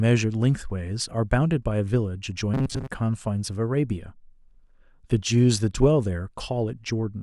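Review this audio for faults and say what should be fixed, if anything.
Robotic sound from repeated short buffers, 2.54 to 2.88 s: a metallic 134 Hz buzz, likely from a starved stream looping about 7.5 ms chunks. Enlarge the jitter buffer or prioritise the audio thread so new audio arrives before playback runs dry.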